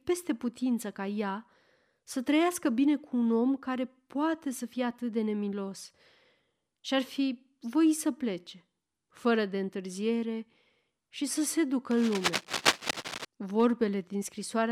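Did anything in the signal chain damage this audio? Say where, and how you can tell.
Yes. From 11.91 to 13.25 s, just after "și să se ducă", a dense, irregular scratching and rustling runs over the speech, only a little quieter than the speech itself. This is cable scratch noise, most likely from the analogue wiring stage: a worn cable or connector being moved, so its contact resistance jumps around. Isolated digital clicks would be sparse and sharp, and dropouts would leave gaps; this is a continuous, uneven burst of crackle lasting over a second.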